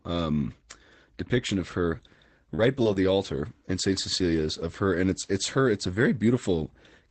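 Short concealed packet loss first appears from 2.55 to 2.63 s, just after "depiction of her". About 20 ms of audio arrived too late to decode, so the receiver extended the preceding sound for 29 ms, covering the hole and overwriting a further 9 ms, then crossfaded back. It is heard as a brief smeared wobble. The same kind of fault follows at 2.83–2.87 s with an 18 ms fill and at 2.93–2.97 s with a 21 ms fill. Each gives a brief smear or wobble in the sound.

A lost packet rebuilt from error correction overlaps each of those spots, at 2.58–2.60, 2.85–2.87 and 2.95–2.97 s. It also occurs alone at 2.79–2.81 and 3.23–3.25 s. In each case a 20 ms packet went missing, and the decoder played the reduced-quality copy carried inside the next packet. Nothing drops out, but those frames come through grainier and noisier than the surrounding audio. This all sits within the Opus call path, which limits the audio to about 8 kHz and has a coding texture that fits a bitrate around 20 kbps.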